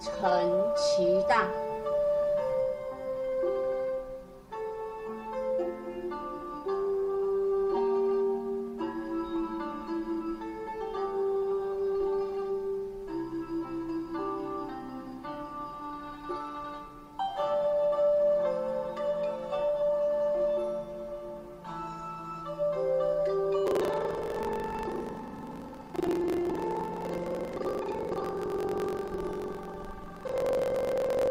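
Right from the start there's channel delay, the comb-filtering kind: one side of the stereo pair runs roughly 5 ms behind the other, and once they're folded to mono the shared content cancels at regularly spaced frequencies, with the first notch around 100 Hz and more at odd multiples above it. That leaves the whole clip sounding hollow and a bit phasey, with a fixed colouring that never shifts.

From 23.64 s through to the end at 31.30 s, buffer tearing comes in on top. The writer and reader of the playback ring buffer have drifted so they cross mid-period, meaning roughly half of each buffer is stale audio from about 100 ms earlier, spliced in with hard edges either side. You hear it as a steady robotic buzz or rattle at 23.4 Hz, which fits a 2048-sample buffer, and it only shows up while there's signal.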